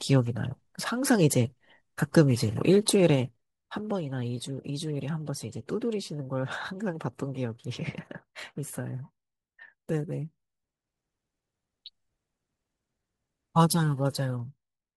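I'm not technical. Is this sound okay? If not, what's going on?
No. The speech has zipper noise in three places: 2.97 to 3.99 s as the level drops, 10.22 to 11.05 s as it rises, and 13.56 to 14.95 s as it drops further. The volume moves in small jumps, about ten a second, instead of gliding, and each jump leaves a tiny click. Together they sound like a ticking or zipping riding on the speech while the level changes.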